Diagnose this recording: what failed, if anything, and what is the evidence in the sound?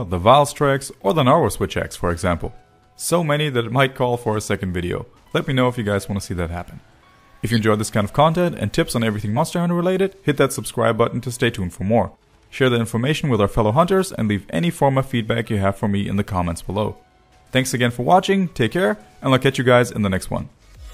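The codec stage failed in two ways. At 7.51 to 7.59 s a corrupt frame is decoded: a single loud burst of about 80 ms, peaking around -5 dBFS, puts energy at the wrong frequencies. Damaged bits in one compressed frame gave the decoder wrong gain values or misread spectral codes. It reconstructed that frame anyway, so the error sounds for roughly one frame length.

At 9.31 to 9.37 s compressed frames are skipped. About 50 ms of audio is missing, and the sound jumps forward at that point. This points to frames lost from the stream or rejected by the decoder as damaged, so playback resumed a whole number of frames later.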